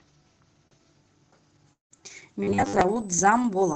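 A speech recording carried over an Opus call path limited to 8 kHz, with a steady USB whine underneath it the whole way through: a fixed tone at 8 kHz, about 25 dB below the speech, which fits current drawn in 125-microsecond USB microframes leaking into the audio through power or ground. On a spectrogram it is a thin, unbroken horizontal line at 8 kHz, right at the top edge of the call's bandwidth, present in pauses as well as during speech. From 0.67 to 0.74 s there is a short stall from a late packet: the jitter buffer ran dry, and the receiver held the last sound for about 37 ms until the packet arrived, then resumed where it left off. Nothing is lost, but the sound is drawn out with a faint buzzy smear, visible as horizontally stretched, repeated texture in the waveform. Overlapping it, from 0.71 to 0.77 s, is a lost packet rebuilt from error correction: 60 ms were decoded from the low-bitrate copy carried in the next packet, so there is no gap, only a rougher, noisier patch with blurred harmonics on the spectrogram. 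From 1.73 to 2.03 s the sound thins into a fading buzz for about 170 ms, then about 150 ms of silence, and resumes with roughly 180 ms of speech gone, most likely a long network dropout. The waveform shows a decaying tail followed by a flat stretch. From 2.43 to 2.81 s the speech turns into a rigid metallic buzz at 100 Hz, most likely robotic sound from repeated short buffers. A 10 ms slice is looped in place of most of the real audio, which shows as a 10 ms repetition in the waveform and evenly spaced 100 Hz bands on the spectrogram.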